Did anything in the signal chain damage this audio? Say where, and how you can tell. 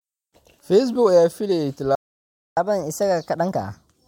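Yes, at playback: after "ayaa filayey" the speech goes silent from 1.95 to 2.57 s, a 0.62 s playback stall, likely a starved buffer. It resumes where it stopped.

Playback stage again: from 2.57 s to the end, catch-up at higher speed runs at 1.15x, pitch up about two semitones. Tempo rises with pitch, unlike a pure pitch shift.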